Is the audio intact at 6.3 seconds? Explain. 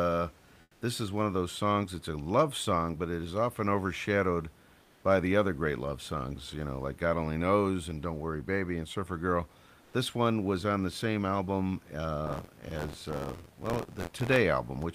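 Yes, the speech at 6.3 seconds is intact, with only the room's own background noise sitting about 32 dB below it.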